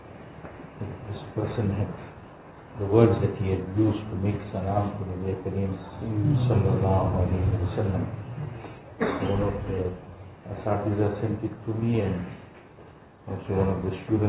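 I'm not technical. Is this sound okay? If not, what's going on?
Yes, there are no faults.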